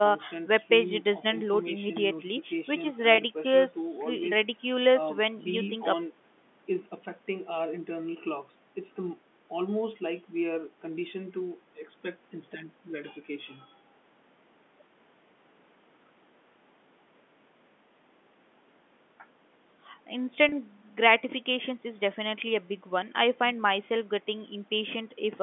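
Packet loss with pitch repetition at 3.15 and 20.49 s: each 30 ms gap, fitting one lost packet, is filled by looping the last pitch period, heard as a brief buzzy hold.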